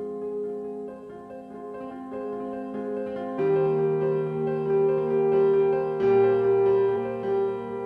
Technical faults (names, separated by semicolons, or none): compressed frames skipped